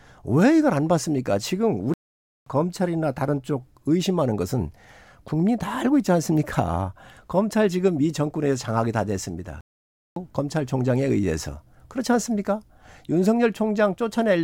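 Speech interrupted by two playback stalls, at 1.94–2.46 s and 9.61–10.16 s. The audio cuts off mid-flow into silence for over half a second, unlike a natural pause, likely because the player starved of data.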